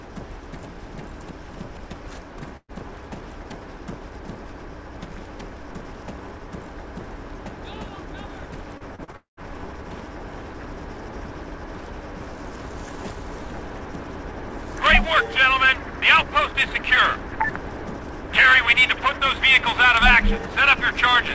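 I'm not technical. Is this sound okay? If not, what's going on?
No. At 2.57 s, a burst of packet loss dropped about 120 ms of audio. The call filled the hole by stretching the last sound, which fades briefly before the sound resumes.

From 8.77 to 9.16 s, repeated packet loss (robotic sound) opened four short gaps, each patched over. That stretch sounds choppy and machine-like, with small pieces missing.

Straight after, from 9.16 to 9.40 s, the last sound carries on and fades out, then goes silent for a moment. About 210 ms is lost, likely a long network dropout.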